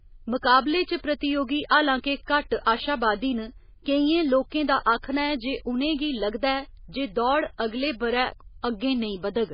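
Speech with heavy MP3 compression throughout. Nothing survives above 5 kHz, and the sound is watery and swirly. This is likely a very low bitrate, around 16 kbps.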